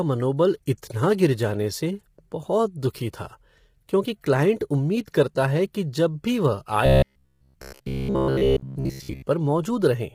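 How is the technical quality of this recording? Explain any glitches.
The recording is technically poor, with degradation throughout and one glitch.

Across the whole clip the speech sounds rough and grainy, with noise between the harmonics, most likely from heavily squeezed low-delay AAC compression, which fits AAC-ELD at a low bitrate near 24 kbps.

From 6.86 to 9.22 s, right after "कि जब भी वह", the speech becomes a rigid metallic buzz at about 67 Hz. This is robotic sound from repeated short buffers, likely caused by roughly 15 ms chunks being replayed while most of the real audio is skipped.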